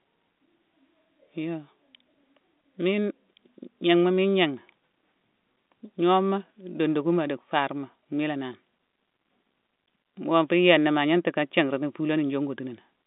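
Nothing goes wrong in this one: the speech just sits in its ordinary telephone-line band, with the G.711 coding keeping everything below about 3.8 kHz and leaving at most a faint trace of its own.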